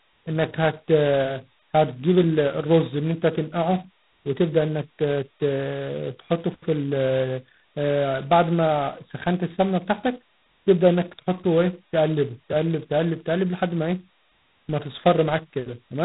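From start to end, the speech carries heavy G.726 ADPCM damage, which fits the 16 kbit/s mode's two bits per sample. A harsh, rasping hiss tracks the speech level. A spectrogram shows a hard ceiling at 3.9 kHz and grainy noise between harmonics.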